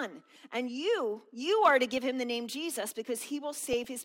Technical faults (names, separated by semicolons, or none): DAB burbling